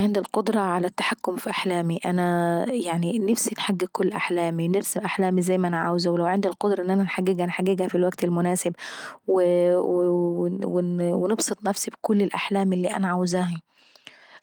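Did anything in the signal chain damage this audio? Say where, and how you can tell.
No, nothing in the chain audibly damages this speech at any stage.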